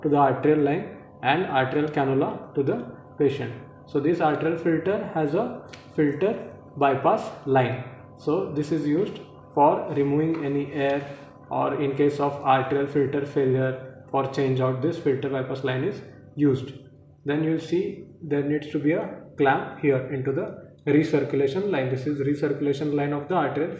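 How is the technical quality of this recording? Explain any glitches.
No glitches can be heard anywhere in the recording. There is nothing in the audio that calls for a technical explanation.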